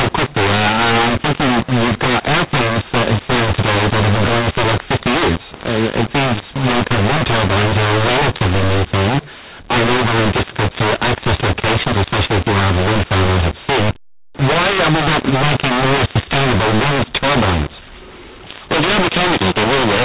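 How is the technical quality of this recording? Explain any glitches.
The recording has one serious fault that runs for its whole length: a mu-law and A-law mix-up. It is present from start to finish. The speech was coded with G.711 mu-law but decoded as A-law. The two laws map the same 8-bit codes to different levels. So some samples come out too loud, others too soft, and the quietest ones jump well above silence. The speech sounds harsh and gritty. Pauses fill with hiss. The telephone band still cuts off at 4 kHz.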